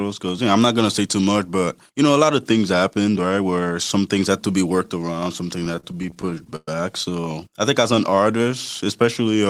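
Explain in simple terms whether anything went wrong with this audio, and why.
Repeated stalls (stutter) from 5.59 to 7.23 s. The speech kept halting because data arrived too late and the playback reserve ran dry. More than two dozen times the system stretched the last sound to cover the wait, the longest about 116 ms. Nothing is lost, but about a quarter of that stretch is filler, so it drags and stutters.

Jitter buffer slow-down from 7.95 to 9.03 s. The playback reserve was running low or had just been made deeper, so the system built it up by repeating tiny slices of the sound. The speech plays at about 92% speed at the same pitch, adding roughly 93 ms and drawing syllables out slightly.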